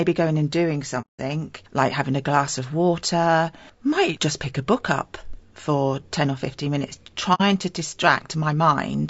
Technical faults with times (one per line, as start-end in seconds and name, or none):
0.00-9.10 low-delay AAC compression
1.01-1.20 AAC frame loss with muting
7.34-7.41 AAC frame loss with muting